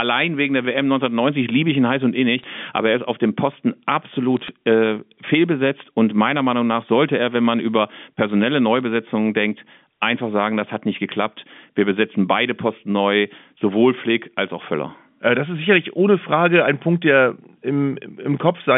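At 2.39–2.44 s, 4.37–4.48 s and 8.76–8.82 s, bit errors on the digital phone line flip individual G.711 samples, giving brief crackly ticks over unbroken speech rather than the gaps that packet loss leaves.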